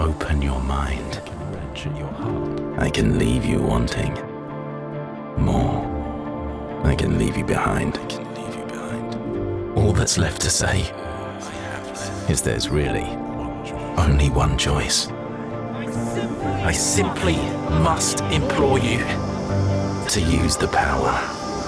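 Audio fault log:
Nothing stood out on listening.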